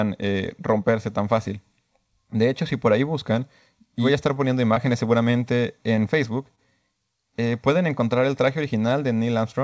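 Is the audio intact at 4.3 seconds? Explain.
No, there is a short stall from a late packet at 4.34 to 4.38 s, just after "y voy a estar". A packet arrived late and the jitter buffer ran dry, so the receiver stretched the last sound by 23 ms before resuming. Nothing is lost, but the sound holds slightly too long.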